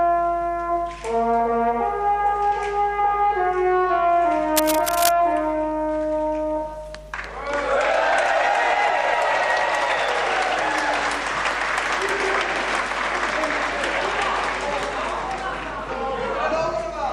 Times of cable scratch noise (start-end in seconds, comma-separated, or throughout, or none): 4.56-5.12